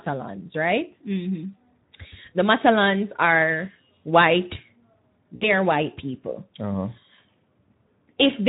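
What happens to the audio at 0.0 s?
From the very start the speech carries Speex codec damage, and it runs the whole way through. The encoder is short of bits for the excitation, which fits a setting around 11 kbps, so the voice comes out plainly noisy and hoarse.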